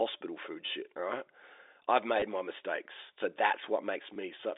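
Speech carried over a G.711 telephone line, band-limited to about 300 Hz to 3.7 kHz, shows packet loss with last packet repeated at 0.66 s (just before "shit all right I've"), 2.2 s (just before "my mistakes so") and 4.14 s. Each 20 ms gap is filled by replaying the preceding audio, which fits two lost 10 ms packets. The gap sounds like a brief robotic stutter.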